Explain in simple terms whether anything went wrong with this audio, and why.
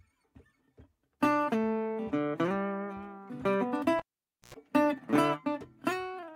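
Something did go wrong in the music, right around 3.99 s to 4.54 s: a cable pulled and plugged in while the signal was live. You hear a pop as it comes out, then about half a second of near silence while nothing's connected. Next comes a short burst of mains buzz, about 95 ms, a 60 Hz hum picked up while only the plug's tip was touching. A second pop follows as it seats properly and the music comes back.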